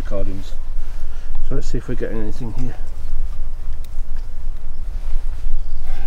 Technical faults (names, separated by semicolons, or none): none